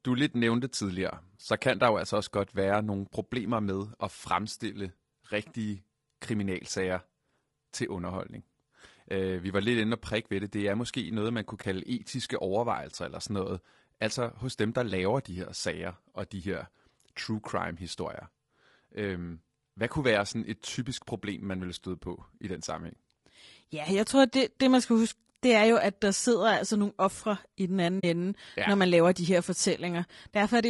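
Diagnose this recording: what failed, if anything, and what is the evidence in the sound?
The codec stage shows plainly audible damage through the whole speech clip: a rough, grainy texture with noise filling the gaps between harmonics. This points to low-delay AAC compression, likely AAC-ELD at around 32 kbps. Its short frames resolve pitch harmonics poorly, which separates it from broadband hiss.

Network or transport loss causes AAC frame loss with muting at 11.61–11.64 s and 27.99–28.04 s, which fits one and then two lost frames. The decoder zeroed the missing spectrum, and the overlapping windows faded the sound out and back in. That leaves a brief dip and then a soft-edged hole, unlike the abrupt cut of a buffer dropout.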